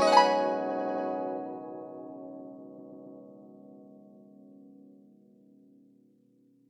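Repeated frames at 0.65–1.03 s and 2.74–3.16 s: a stretch of compressed music was decoded again and again, so the same fragment stutters. First, a 92.9 ms block (which fits two frames) plays four extra times, adding 371.5 ms. Then a 139.3 ms block (fitting three frames) plays three extra times, adding 418 ms.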